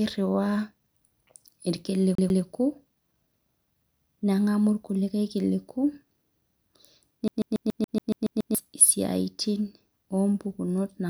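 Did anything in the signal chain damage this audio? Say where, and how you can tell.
Yes. At playback, the CD is stuck on one turn: a 141 ms slice repeats twice from 2.15 to 2.43 s, then nine times from 7.28 to 8.55 s, with a brief mute at each jump. The fixed, even loop rate distinguishes it from irregular network jitter-buffer repeats.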